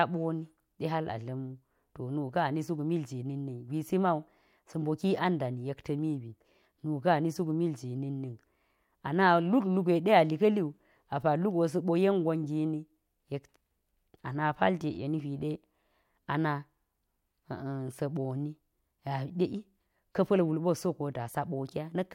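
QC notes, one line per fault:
No faults found. Nothing in this speech recording needs a QC entry.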